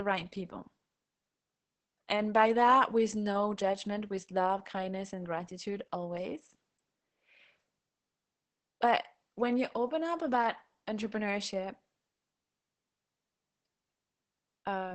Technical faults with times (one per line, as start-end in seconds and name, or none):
0.00-14.94 Opus voice compression